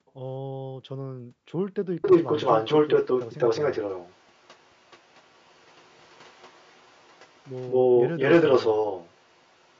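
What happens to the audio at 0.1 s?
At the very start, the echo canceller clamped down on its microphone while its loudspeaker was playing, so the background is gated by the echo canceller from 0.0 to 0.06 s. The room sound drops by about 40 dB, a brief dip of roughly 70 ms, before the canceller releases.

From 0.06 to 0.14 s, which covers 0.1 s, there is an echo leak, likely from that canceller failing to remove all of the loudspeaker sound its microphone picked up and sending the remainder back. It is heard as a faint scrap of the speech returning 213 ms late, around 30 dB below the speech itself.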